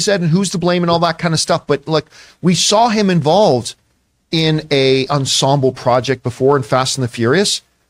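No faults turn up anywhere in this recording; the speech just carries on from beginning to end without a single glitch, dropout or odd sound to point at.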